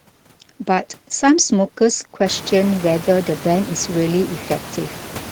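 There are no technical faults to describe; the room noise that grows noticeably louder about halfway through belongs to the recording itself.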